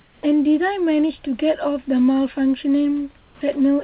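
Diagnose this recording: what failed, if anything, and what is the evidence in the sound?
Call processing, comfort noise in place of the background: from 0.0 to 0.23 s and from 3.17 to 3.41 s the room noise becomes a smooth, featureless hiss, about 9 dB and about 4 dB quieter respectively. This is likely discontinuous transmission, with the receiver synthesising shaped noise while the sender stays silent.

Call processing, onset clipped by the voice detector: the speech enters abruptly at 0.23 s and at 3.41 s, missing roughly 40 ms of its soft start (0.19 to 0.23 s and 3.37 to 3.41 s). The detector likely reacted late, so that opening was never sent and comfort noise covered the gap. The audio band stops at 4 kHz, which fits a G.711 call codec.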